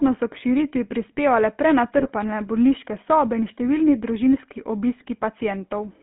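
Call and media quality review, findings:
GSM full-rate codec, whole clip: buzzy, gravelly roughness on the speech. Band is roughly 200 Hz to 3.4 kHz, with nothing on top. Pulse-driven vocal-tract model with decimated excitation, which fits the old 13 kbps GSM full rate. Damage plainly audible.

GSM bit errors, 0.34–0.41 s, just before "širitvi prispevale": squawk and pop. Corrupted filter, pitch or gain values warp the spectrum and level for a few frames.

GSM bit errors, 1.98–2.11 s, between "širitvi prispevale" and "bolniške sobe in številni": longer gargle, several frames mangled.

GSM bit errors, 4.96–5.05 s, after "sobe in številni družinski": another short squawky burst. Same weak-link decoder damage.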